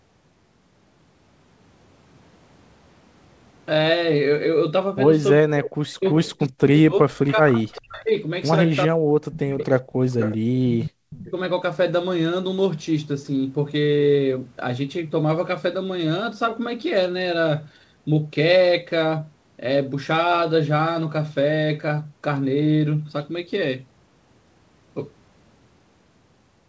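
From 5.38 to 8.14 s, speech is suppressed in double talk: the echo canceller, likely unable to tell this talker from loudspeaker echo during overlapping talk, pulls the speech down by up to around 40 dB. The speech dips and breaks up for about two seconds in total. It happens again at 8.87 to 9.62 s and 10.51 to 11.35 s.

An echo leak comes through at 7.28 to 7.32 s, 7.74 to 7.82 s, 9.59 to 9.65 s and 10.19 to 10.37 s. Far-end residue has likely slipped past the canceller, giving brief delayed copies about 400 to 430 ms late. These rise from roughly 25 dB below the speech to roughly 10 dB below.

At 9.9 to 10.0 s, the background is gated by the echo canceller, which clamps the microphone. The room sound drops by about 19 dB for a tenth of a second.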